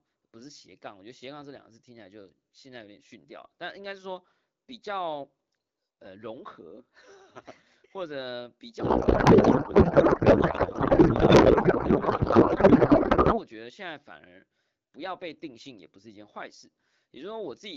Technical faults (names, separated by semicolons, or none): codec payload misread